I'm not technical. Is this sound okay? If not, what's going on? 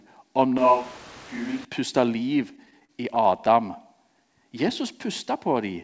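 No. From 0.58 to 1.65 s the voice suddenly turns hollow and roomy, drops a little in level, and picks up more background noise before snapping back. That is a switch to a distant microphone. Most likely the close microphone dropped out and a mic farther away, such as a camera's, carried the sound for that second. Distance thins out the bass and lets the room and its noise in.

From 2.50 to 3.56 s the audio drags and hiccups about a dozen times. That is repeated stalls (stutter). The audio data arrived late over the connection, so playback kept running dry. Each time, the receiver stretched the last bit of sound to cover the wait, with the longest hold about 41 ms. No speech is actually lost, but the rhythm sounds stuttery.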